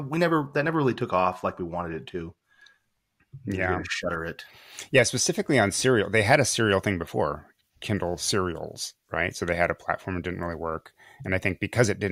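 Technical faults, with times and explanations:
0.47–4.01 s, de-emphasis applied wrongly: an unneeded treble cut slopes the speech down smoothly, about 10 dB at 10 kHz, so it sounds dull and muffled.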